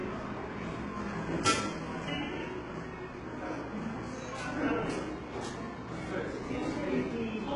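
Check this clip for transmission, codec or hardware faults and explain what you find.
One codec fault runs through the whole clip. HE-AAC compression, throughout: the treble above the coded band is likely rebuilt by spectral band replication, copying lower bands upward under a coarse envelope, which fits a very low bitrate near 12 kbps. The top end sounds gritty and metallic, with heavy artefacts and nothing above 10.9 kHz.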